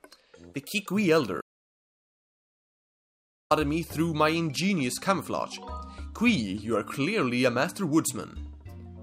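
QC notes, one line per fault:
1.42–3.51 s, audio dropout to silence: sound cuts off to silence, no room tone, for about 2.1 s, likely from a lost input link.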